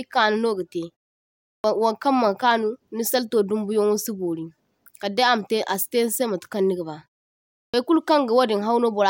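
At 1.6 s, speech resumes after a pause of about 0.72 s, and the first 41 ms are missing. At 7.7 s, the same happens after a 0.7 s pause, losing 36 ms. Both are a clipped start after a pause. The output device drops into a sleep state during silence. It then needs a moment to wake and lock again. Meanwhile the opening sounds are swallowed. Each word bursts in abruptly, its onset cut away.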